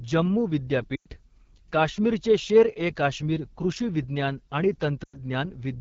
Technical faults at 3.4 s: AMR wideband (HD Voice) codec

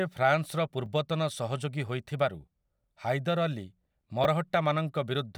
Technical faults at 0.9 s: repeated buffer

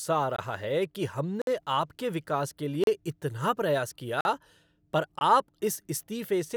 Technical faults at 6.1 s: none

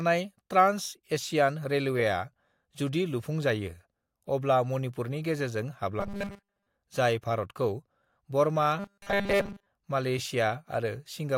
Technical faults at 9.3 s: robotic sound from repeated short buffers

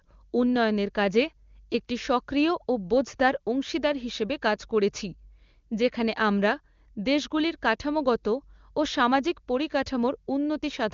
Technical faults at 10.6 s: none

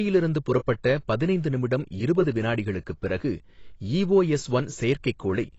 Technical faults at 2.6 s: AAC compression

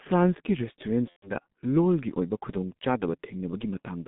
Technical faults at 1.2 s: G.723.1 codec; VoIP packet loss concealed by the speech codec

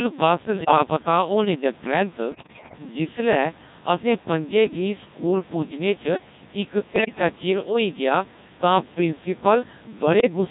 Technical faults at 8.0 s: Codec 2 vocoder

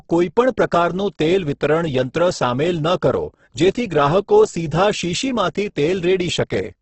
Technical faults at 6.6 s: Opus compression

